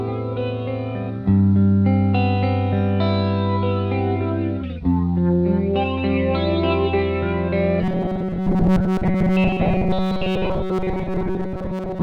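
From 7.82 s to the end, robotic sound from repeated short buffers: a fixed 188 Hz buzz that, unlike hum, tracks the sound, likely from replaying chunks of about 5 ms.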